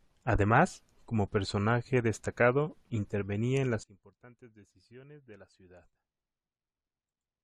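At 3.84 s, right after "personaje destacado intervenía en", the level drops abruptly by about 24 dB. It stays down until the end. This is a sudden gain jump. The speech and the background noise fall together, in a single step, with no fade. Nothing in the sound itself changes, only its loudness. The cause is likely a digital gain setting applied from one sample to the next, without any ramp to smooth it.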